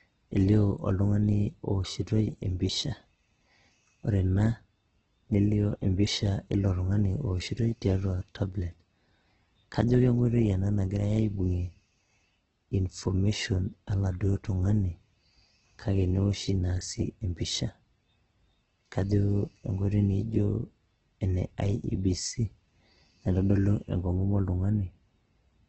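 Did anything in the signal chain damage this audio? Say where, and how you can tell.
Yes, at the codec stage: the speech sounds grainy and rough throughout, with nothing above 8.1 kHz, likely heavy Opus compression squeezed to around 12 kbps.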